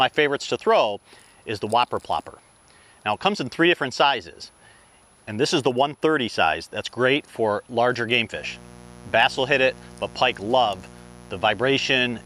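Mains buzz enters at 8.33 s and continues to the end at 12.26 s. Switching spikes from a dimmer, rectifier or poorly shielded cable have leaked into the signal path, arriving twice in each 60 Hz mains cycle. Because the spikes are sharp, they carry a dense stack of 60 Hz harmonics extending up to several kHz. The result is a steady, raspy buzz sitting around 25 dB below the main sound.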